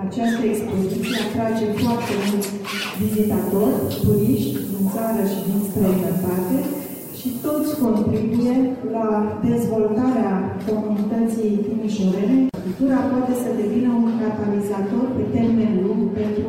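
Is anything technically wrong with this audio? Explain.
Yes. From 2.94 to 7.85 s there's low bit depth with noise shaping: the audio drops to about 6 bits, and the rounding error gets pushed upward in frequency, so you hear a steady, thin hiss climbing toward the top, sitting only around 15 dB under the signal.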